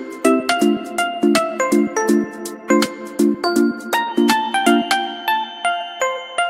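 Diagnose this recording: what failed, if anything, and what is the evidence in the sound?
A feedback whistle enters at 4.06 s and runs to the end of the clip at 6.50 s: a thin, steady tone at 3.1 kHz sitting about 20 dB below the programme, swelling and fading slowly in level but never building. The failure is in the analogue acoustic path, likely a loudspeaker-to-microphone loop with gain held just at the edge of oscillation, so a single frequency keeps recirculating without tipping into a full howl.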